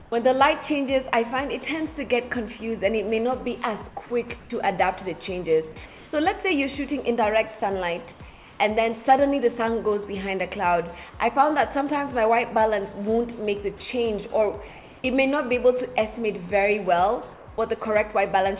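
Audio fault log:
0.00–0.12, 4.40–4.50, 5.86–6.12, 8.12–8.60, 14.68–15.04, 17.34–17.48 s: comfort noise in place of the background. The background in each pause becomes a steady, featureless hiss, about 5 dB quieter at the start and near level at most of the others. Likely discontinuous transmission; unlike a dropout, it never falls fully silent.
7.60–7.62 s: sound dropped by the voice detector. A very brief piece of the sound itself, about 10 ms, gives way to that same flat noise. The detector likely misjudged quiet sound as background, so real content is lost, not just ambience.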